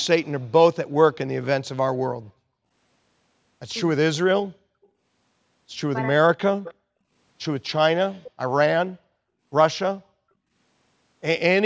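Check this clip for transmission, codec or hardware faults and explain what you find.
Two kinds of fault turn up in this speech, both pointing to a speakerphone echo canceller in a call, with content stopping at 8 kHz as the call path's band limit.

Echo leak, at 4.83–4.87 s (very faint), 6.64–6.74 s and 8.24–8.31 s (about 20 dB down): a residual copy of the speech trailing by 311 ms, likely from incomplete echo cancellation. On a spectrogram these show as faint, smeared harmonic ghosts.

Speech suppressed in double talk, at 6.05–6.1 s: the speech briefly dips by a few dB, likely the canceller ducking the talker during overlap. This appears as a shallow notch in the waveform envelope.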